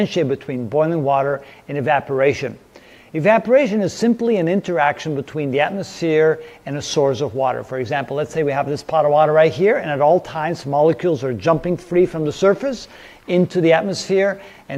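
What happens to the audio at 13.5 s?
Nothing goes wrong at 13.5 s; the audio carries straight through that moment with no dropout, click, distortion or other fault.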